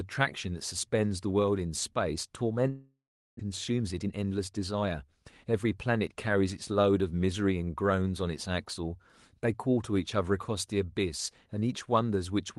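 A speech recording with two network-related faults. From 2.69 to 3.41 s, a long network dropout likely cut off incoming audio. The receiver stretches the last sound into a fading buzz or hiss, then about 0.37 s of silence follows. When the speech resumes, roughly 0.4 s of it is simply gone. The stall also left the jitter buffer holding around a third of a second more than its target. From 3.49 to 5.65 s, a jitter buffer speed-up trims short pitch-period slices to drain that backlog, so the speech runs at 112% speed with unchanged pitch and sounds hurried.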